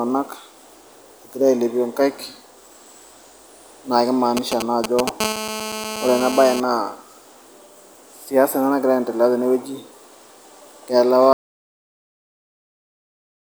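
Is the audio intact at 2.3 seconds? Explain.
Yes, the audio is intact at 2.3 seconds, with no fault audible at that moment.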